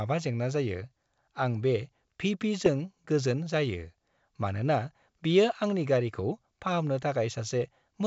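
Speech carried over G.722 at 64 kbit/s shows bit errors on an ADPCM link at 2.66–2.69 s and, more harshly, 6.19–6.22 s. Each flipped bit throws off the decoder's step size and predictor, so instead of a single clean click you hear a rough burst that rings on with a brief level wobble.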